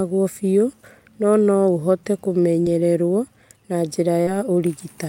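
Right after "biũ no no ũhote", at about 2.63 to 2.67 s, there's a short concealed packet loss. Roughly 20 ms of the call arrived too late for the decoder, so the receiver patched the hole by extending the preceding sound and then blended back into the real signal. You hear it as a quick smear. A second one hits at about 4.23 to 4.29 s, where around 40 ms went missing. That's a longer patch.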